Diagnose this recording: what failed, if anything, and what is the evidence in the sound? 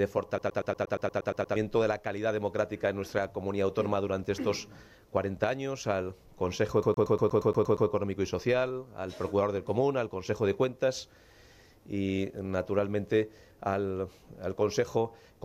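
The failure is at the playback stage: a CD stuck on one turn. From 0.38 to 1.56 s, a 118 ms slice of sound repeats ten times. From 6.83 to 7.89 s, the same 118 ms loop repeats nine times. Each repeat ends in a brief mute before the jump. The result is a fast, even stutter. A scratch is knocking the laser back one track at the same point on each rotation, so the same fragment replays.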